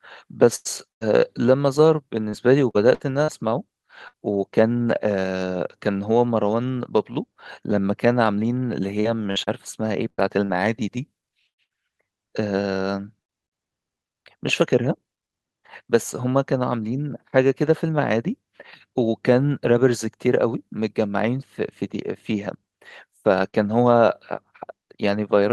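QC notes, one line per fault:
0.55–4.19 s and 9.00–13.54 s, repeated packet loss (robotic sound): seven and then nine holes, the longest 99 ms and 111 ms, are each patched by extending the preceding sound. About 12% of each stretch is synthetic, so the audio turns choppy, unlike a lone dropout.
23.49–23.56 s, short concealed packet loss: about 40 ms never arrived in time. The receiver continued the last sound to cover it, then faded back into real audio, leaving a single brief smear or wobble rather than a sustained robotic run.
23.52–23.54 s, lost packet rebuilt from error correction: inside that same hole, one 20 ms frame was restored from a low-bitrate copy carried in the following packet. It plays without a gap but sounds rougher and noisier.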